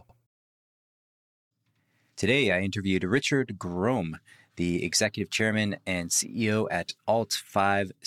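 From the start to 2.23 s, the speech has a channel delay (doubling). One channel runs about 93 ms late, which fits a 4096-sample buffer. Summed to mono, the late copy arrives separately. Each sound is followed by an equal-level slap echo.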